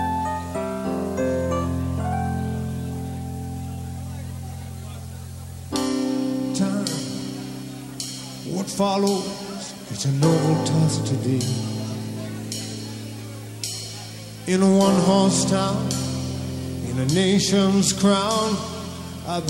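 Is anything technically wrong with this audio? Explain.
No, nothing here sounds technically wrong; it all comes across just fine as far as I can hear.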